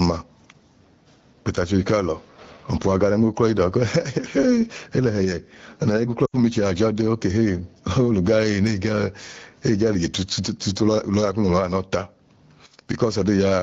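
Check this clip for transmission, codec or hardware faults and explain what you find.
Two things stand out in this speech clip: gain pumping all the way through, and a short burst of lost AMR speech frames just past the six-second mark.

The gain pumping runs the whole length. The level swings by something like 15 dB. The likely cause is the mic gain set far too high, with a fast limiter clamping down on each peak. That leaves everything squashed and breathing.

The lost AMR speech frames come in from about 6.26 to 6.41 s. Roughly 80 ms of audio goes missing, which fits four dropped 20 ms frames after radio errors. The decoder papers over the gap by repeating the last good frame's pitch and vocal-tract shape while fading it out, so the sound smears and drops away quickly before recovering a bit weak. Around that, the wideband codec sounds clean, consistent with a rate near 12.65 kbit/s.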